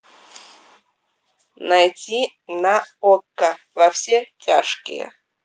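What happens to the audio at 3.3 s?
Nothing goes wrong at 3.3 s; the speech runs through that moment intact, with no dropout, click, distortion or other fault.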